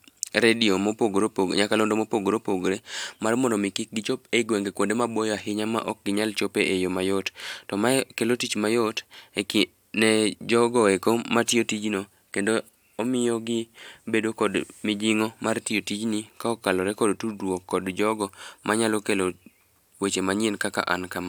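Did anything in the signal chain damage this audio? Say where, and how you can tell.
No, the signal chain left no audible damage on this speech recording, and the signal holds steady without any dropout, distortion or interruption at any point.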